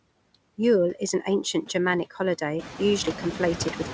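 Noise suppressor artifacts run through the whole clip. The suppressor pulls the steady background down by about 20 dB between phrases, then lets it swell back under the speech. On a spectrogram the noise floor flickers in irregular patches, most visibly after the room noise rises by about 12 dB at roughly 2.5 s. Above 8 kHz the spectrogram stays empty, which fits a wideband call codec such as G.722.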